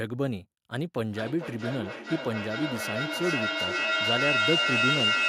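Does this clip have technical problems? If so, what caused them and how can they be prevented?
Yes. From 1.09 s to the end of the clip, the speech is caught in a feedback echo between two devices. Two devices on the same call share one room. One device plays the other's sound, and that microphone hears it again. Each canceller only removes its own playback, so the loop survives. The repeats come round about every 0.4 s. They grow louder instead of fading, peaking about 3 dB above the speech. To prevent it, join from only one device per room, or mute the extra device's microphone and speaker.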